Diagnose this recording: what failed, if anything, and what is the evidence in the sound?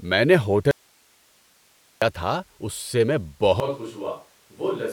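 Audio dropout to a faint residue, 0.71 to 2.02 s, right after "میں نے": speech vanishes for 1.3 s, leaving only hiss about 35 dB down, likely a momentary analogue connection break on a live input.

Switch to a distant microphone from 3.60 s to the end, after "اس سے میں": speech turns suddenly roomy and thin, about 10 dB quieter, room noise near 40 dB below it, likely the close microphone's feed failing.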